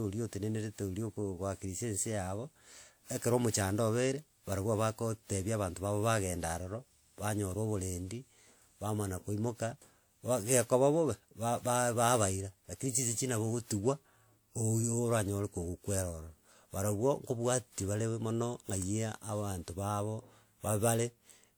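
From start to finish the speech carries a swirly, hollow coloration with smeared consonant attacks, more degraded than a single pass at around 96 kbit/s would leave, even though content still reaches about 20.1 kHz. This is generation loss, likely from the audio being decoded and re-encoded roughly four times through a WMA-type codec. Each pass quantised the signal on a shifted frame grid, so quantisation noise compounded.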